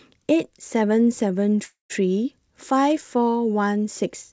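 Speech carried over a call link whose spectrum stops at 8 kHz, consistent with G.722 at 64 kbps, has a call audio freeze from 1.64 to 1.92 s. The last sound is stretched into a fading buzz or hiss, then about 130 ms of silence before the speech resumes where it stopped, now roughly 0.26 s late with nothing lost. The likely cause is packets held up in transit that drained the jitter buffer. On a spectrogram the final harmonics smear into flat horizontal bands that dim to a blank gap. The waveform shows a repetitive, decaying envelope flattening to near zero.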